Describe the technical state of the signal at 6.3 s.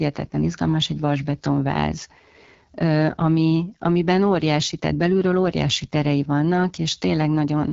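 At 6.3 s the speech carries AMR wideband (HD Voice) codec damage, present throughout the clip. The codec models the voice as pulses through a vocal tract filter. Its rasp fits a low rate such as 8.85 kbit/s. The speech sounds rough and gritty, with nothing above 7.3 kHz.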